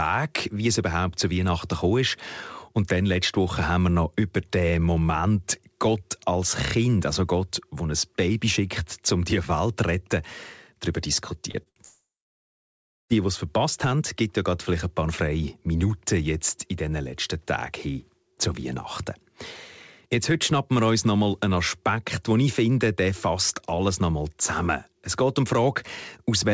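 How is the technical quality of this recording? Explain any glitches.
There's one rough patch, a cluster of network glitches between about 11.5 and 13.1 s. The top end stops at 8 kHz, which fits a G.722 call path at around 64 kbps.

Short concealed packet loss hits at 11.51 s and 11.63 s. Each time about 30 ms never arrived, and the receiver papered over it by extending the last sound, so you hear a quick smear or wobble.

A burst of packet loss follows from 11.69 to 11.79 s. About 60 ms went missing, and the receiver carried the previous sound forward while fading it, giving a brief held buzz or hiss before the audio picks up further along.

A long network dropout runs from 11.85 to 13.13 s. There's a short fading continuation, then roughly a second of silence, and the audio resumes with that stretch gone. The cause is likely a network outage where nothing got through.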